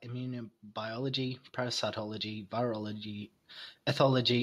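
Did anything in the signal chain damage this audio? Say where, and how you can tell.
Yes. From 0.07 s to 4.38 s the speech and the background noise beneath it swell together, climbing steadily by about 7 dB across the whole clip rather than jumping at any one point. That joint rise is automatic gain rising, a call-processing stage. The automatic gain control judged the incoming level too low and kept nudging its gain upward, so everything it passed, noise included, grew louder over those four seconds.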